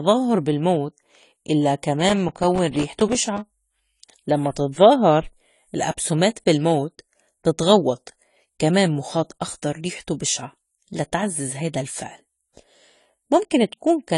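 Throughout, the speech is dull and smeared, with a fizzy, warbling edge on sibilants and nothing above 11.5 kHz. This is likely AAC compression, with AAC-LC coarsely quantising its spectrum and lowering the cut-off, which fits a bitrate around 32 kbps.

From 2.01 to 3.38 s, just after "بالموت إلّا", there is processor overload crackle: a gritty, tearing burst as about forty missed buffers of roughly 3 ms each drop out to silence, leaving hard-edged gaps that stop once the load passes.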